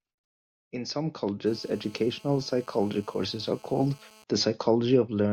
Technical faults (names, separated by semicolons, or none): GSM phone buzz